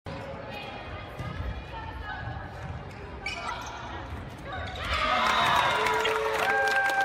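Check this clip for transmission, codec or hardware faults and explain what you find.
Two short faults come from damaged data in a compressed stream, at 3.46 to 3.51 s and again at 6.02 to 6.07 s, each about 44 ms long. In both places, bytes in the encoded stream were corrupted. The decoder couldn't read those frames correctly, lost its place in the stream and had to search for the next valid frame header before it could resume. Each event is heard as a brief chirp or blip that breaks the audio.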